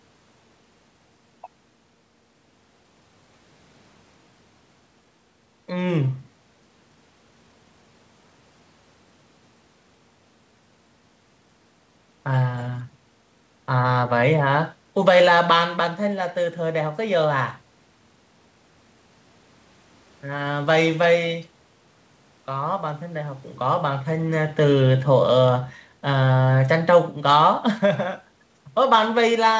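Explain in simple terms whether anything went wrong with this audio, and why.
Nothing went wrong here: the speech just sounds like a normal call, where the call's own processing trims off everything above about 8 kHz and the very lowest bass, and that's expected.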